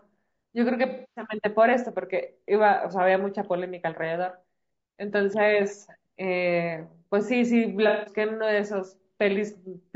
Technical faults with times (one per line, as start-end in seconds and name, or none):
0.00-9.96 low-delay AAC compression
0.89-1.27 AAC frame loss with concealment
7.88-8.16 AAC frame loss with concealment